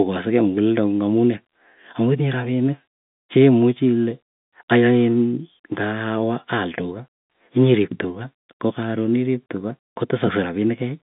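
No technical faults can be heard anywhere here.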